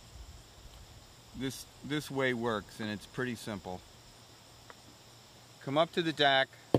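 No technical faults can be heard anywhere in it.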